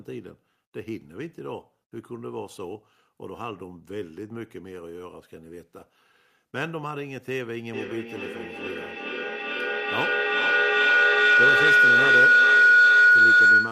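At 7.73 s a feedback howl begins: a microphone-to-loudspeaker loop is gaining level on each pass, so the sound narrows to a tone around 1.5 kHz, pulsing roughly every 0.4 s and peaking about 15 dB above the speech, through the end of the clip.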